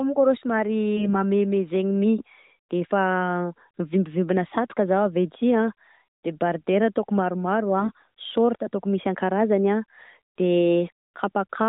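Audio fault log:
0.97 to 1.15 s and 7.78 to 8.08 s (between "an debardeure ataoko maromaro" and "sôrta ataoko misy"), AMR bit errors: on a weak mobile link, roughly one bit in ten, then somewhat fewer, arrived flipped in the lightly protected parts of the speech frames while the check on the key bits still passed. The decoder misplaces its excitation pulses and misreads fine pitch, gain and spectral values, so the speech keeps its pitch and level but turns hoarse and gargly over the narrowband AMR-NB codec.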